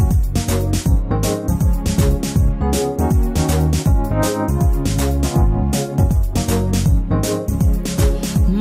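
No technical faults can be heard anywhere in the audio. Nothing breaks into or disturbs the sound at any moment.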